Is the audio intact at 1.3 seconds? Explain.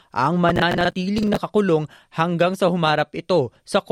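No. At 1.3 seconds the speech is overlaid with a gritty burst of crackle running from 0.49 to 1.37 s. This is processor overload crackle: around twenty buffers of about 10 ms missed their deadline and repeated old audio with hard edges.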